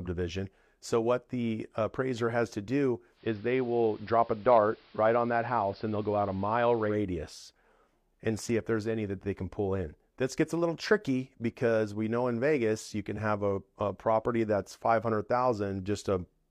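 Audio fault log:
3.13–6.99 s, digital radio blending to analogue: the receiver loses its digital stream and cross-fades over about 134 ms to the station's AM broadcast, then back at 6.99 s. The AM path is band-limited, so the top end goes dull and muffled, and a steady hiss sits roughly 30 dB under the programme. The level is matched across the switch, so the change is heard as the loss of treble and the added hiss.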